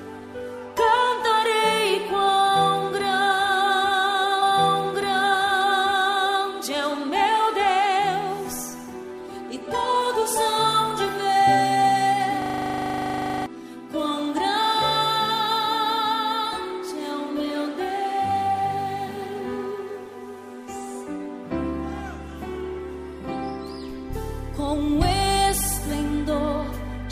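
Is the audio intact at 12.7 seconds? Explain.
No. A system hang loop runs from 12.42 to 13.46 s: the system froze while the audio hardware kept replaying one 40 ms buffer. That slice repeats 26 times at 25 Hz, a rapid mechanical rattle replacing about a second of real sound.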